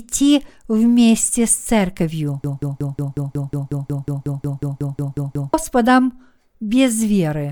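At 2.44 s, right after "вместе с церковью", the speech locks into a broken-record loop: one fragment of about 182 ms plays 17 times back to back, exactly identical each pass, until 5.54 s. The likely cause is a stalled player, encoder or stream resending the last fragment it held, so about 3.1 s of the speech that belonged there is gone. Unlike an echo, the repeats don't fade or overlap. Unlike a dropout, the gap is filled with sound rather than silence.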